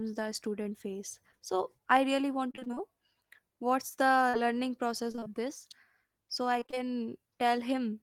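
From 2.51 to 2.82 s the sound turns choppy and robotic. This is repeated packet loss. Audio kept failing to arrive, and each hole was patched by stretching the last sound forward. The holes are short, none longer than about 22 ms, which fits lost 20 ms packets. They come one after another, so nearly half of this stretch is filled in rather than real. The result is choppy sound with pieces missing.

At 4.29 to 4.35 s there is a short concealed packet loss. About 40 ms never reached the decoder. The receiver continued the previous sound to cover the hole, then blended back into the real signal. It comes across as a brief smear or wobble.

Repeated packet loss returns at 5.11 to 5.27 s and again at 6.59 to 6.92 s. Each run has the same short, closely spaced holes. In each, about half the span is filled in. Both bring back the same choppy, robotic texture.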